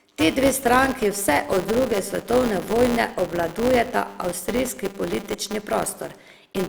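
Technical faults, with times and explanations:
throughout: filter restarted on every block; each 5 ms block opens with a transient, heard as a 200 Hz buzz and seen as evenly spaced waveform spikes and stacked spectrogram lines.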